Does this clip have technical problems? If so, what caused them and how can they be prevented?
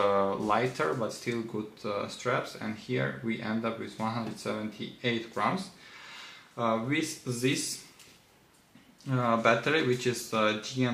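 No, there are no technical problems to report here.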